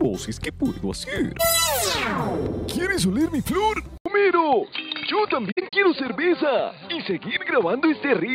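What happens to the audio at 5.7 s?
AAC frames were dropped between 5.51 and 5.73 s, and the decoder filled the gaps by zeroing their spectrum. About 128 ms of audio is missing, spread across roughly 213 ms in short holes, the longest around 70 ms. The loss pattern fits frames of about 21 ms each. Because the overlapping windows taper into and out of each gap, the sound fades away and back rather than cutting. This is AAC frame loss with muting, and it produces soft, flickering dropouts.

At this same moment the audio is still coming through a poorer input device. The input was likely switched to it at 3.98 s, and it stays in use to the end. That switch left an 80 ms silence at the change. Since then nothing above 4.7 kHz comes through, so the sound at 5.7 s is dull and boxy. The loudness is roughly unchanged, and the new device adds its own faint noise floor well below the signal.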